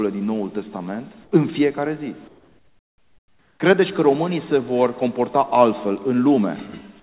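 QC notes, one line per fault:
1.24–1.32 s and 2.28–3.6 s, comfort noise in place of the background: the sender likely stopped transmitting during these pauses, so the receiver filled 80 ms, then 1.32 s, with steady synthetic noise about 2 dB and about 4 dB quieter, erasing the background's detail.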